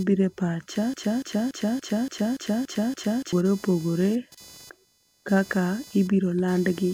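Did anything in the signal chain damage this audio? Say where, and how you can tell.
Yes. A buzzing whine at roughly 500 Hz, about 25 dB below the speech, runs through the whole clip, rising and falling with computer load rather than the talking. This is computer activity noise: processor, graphics or mouse activity disturbing the shared analogue ground.

Right after "bire pacha", a 286 ms fragment repeats back to back eight times, from 0.94 to 3.33 s, and the speech that belonged there never arrives. This broken-record loop likely comes from a stalled player, encoder or stream buffer resending its last held chunk.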